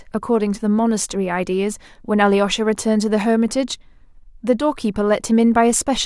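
No technical faults can be heard in this speech recording, so there are none to describe in time order.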